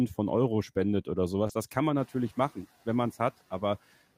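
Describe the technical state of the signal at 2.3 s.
Noise suppressor catching up, from 1.97 to 2.56 s, covers the moment at 2.3 s. Room noise jumps by about 16 dB around 2 s, to about 22 dB below the speech, and the suppressor's noise estimate still reflects the quieter level before the jump. The louder background therefore passes with less reduction at first, then sinks by about 7 dB over 590 ms as the estimate adapts.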